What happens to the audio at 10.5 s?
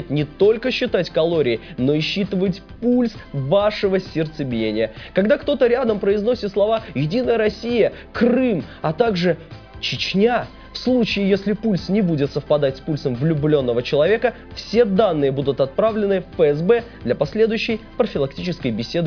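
Nothing goes wrong at 10.5 s; the audio plays through that moment intact, with no fault to be heard there.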